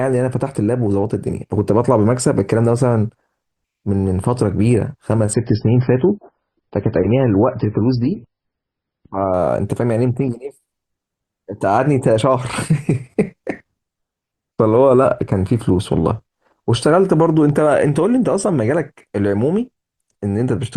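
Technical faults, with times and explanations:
5.34 to 9.34 s, adaptive stream at a lower bitrate: for four seconds the speech suddenly loses its top end, with nothing above 5.6 kHz, and turns swirly and smeared with coding artefacts, then snaps back to full clarity with no gap either side. This fits the player switching from a 128 kbit/s MP3 rendition to a 16 kbit/s one while the connection slowed. A spectrogram shows a flat ceiling at 5.6 kHz across that span; the waveform shows no break.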